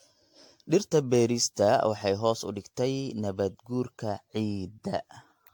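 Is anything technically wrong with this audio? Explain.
Yes. Generation loss runs through the whole speech clip, from start to end. The sound is swirly, smeared and hollow, with blurred consonant onsets, and the character points to AAC-LC at around 96 kbit/s. The likely cause is roughly seven rounds of decoding and re-encoding, each quantising on a shifted frame grid so errors pile up. A spectrogram shows flickering holes between harmonics, smeared transients, and nothing above 19.3 kHz. The waveform shows softened attack edges.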